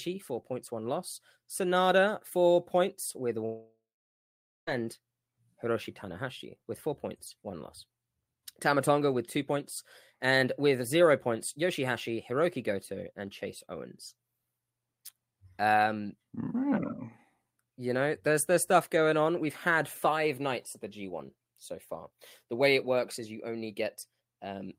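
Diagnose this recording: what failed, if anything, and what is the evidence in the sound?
A long network dropout runs from 3.45 to 4.69 s, right after "four points with". Packets likely stopped arriving: the receiver stretched the last sound into a fading buzz, then left 0.85 s of silence, and speech resumes with about 1.2 s missing.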